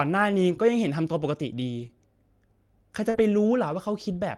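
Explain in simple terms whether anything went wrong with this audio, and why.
Yes, a couple of small network hiccups show up in this speech, each time in two flavours.

Around 1.79 to 1.85 s and again at 3.14 to 3.20 s you get a lost packet rebuilt from error correction. Data went missing, but a rough backup copy riding in the next chunk filled about 40 ms, so nothing drops out. It just sounds briefly grainier and noisier.

Right next to those, at 1.87 to 1.91 s and 3.10 to 3.16 s, there's short concealed packet loss. Audio arrived too late, so the receiver guessed by stretching the last sound across the hole. You hear it as a quick smear or wobble.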